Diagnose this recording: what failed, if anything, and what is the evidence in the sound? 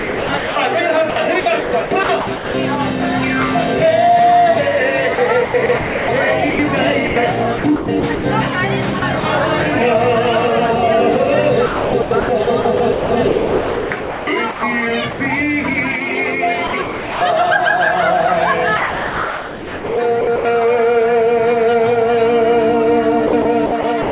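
Call processing: the sender's voice detector likely gated the sound, chopping it into comfort noise at 0.0–0.56, 1.1–2.54, 5.15–8.24, 8.99–9.23, 11.66–15.2, 16.67–17.21, 18.77–20.45 and 23.27–24.11 s.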